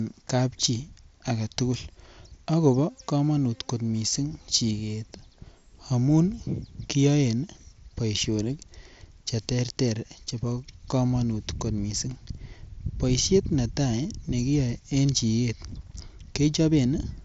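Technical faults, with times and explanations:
The speech comes through a Bluetooth headset link using the wideband mSBC codec, which limits the band to about 8 kHz and leaves only a light grain from the coding, with no faults to report.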